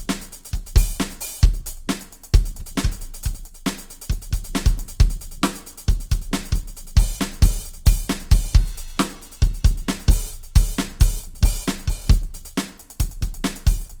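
Music clip with Opus compression damage throughout: tones sound grainy, rough and noisy rather than swirly, likely from a low-rate CELT-mode encode near 24 kbps, with content extending to about 20.2 kHz.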